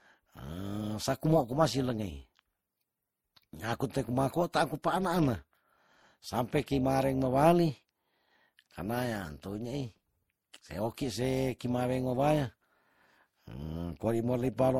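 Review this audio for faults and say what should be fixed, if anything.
Overlap-add ripple runs through the whole speech recording as a metallic buzz with extra tones around each note. The level swells and dips by about 6 dB at a rate of around 300 Hz, because the frames were rejoined with an overlap whose windows don't sum to a steady gain. On a waveform the envelope shows a regular fast scalloping. A spectrogram shows sidebands spaced roughly 300 Hz either side of each harmonic. Prevent it by using a window and hop size that meet the constant-overlap-add condition.

Transcoding between lossy codecs is heard from start to end. The artefacts of the different codecs are heard together, and nothing reaches above 16.5 kHz. This likely comes from an MP3 encode at low bitrate that was then re-encoded to Vorbis at a similar rate. The second encoder spent bits reproducing the first encoder's damage and added its own. 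A spectrogram shows a hard ceiling at 16.5 kHz. Prevent it by encoding once, from the original uncompressed source.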